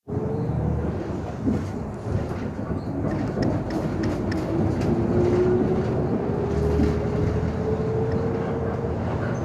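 Everyday sound, with no technical faults heard anywhere in the recording.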